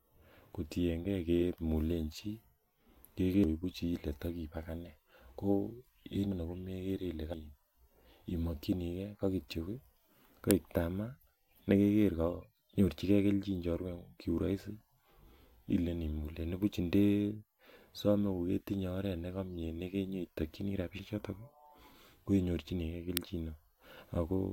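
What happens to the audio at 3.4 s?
At 3.44 s the speech skips forward, and about a fifth of a second of audio is missing, with no gap of silence. This is likely a dropped buffer (overrun): samples were overwritten before being read, and the surviving audio was joined end to end.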